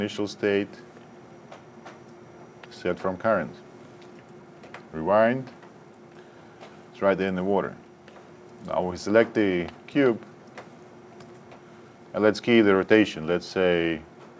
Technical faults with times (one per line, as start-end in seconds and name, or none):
none